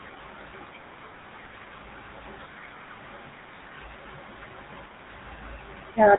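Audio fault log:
Throughout: GSM full-rate codec. The speech carries a buzzy, gravelly roughness from start to end, and the damage is plainly audible. The codec rebuilds the voice from a vocal-tract filter driven by a coarse pulse train, so fine detail in the excitation is lost and replaced by a regular grainy texture. Nothing is heard above 3.8 kHz, which leaves the sound dull and narrow. The heavy coding points to the old 13 kbps full-rate mode.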